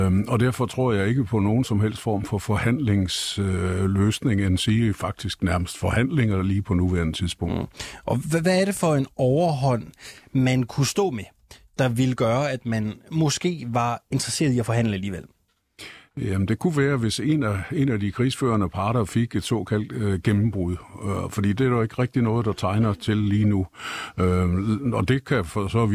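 No faults are audible anywhere in the recording.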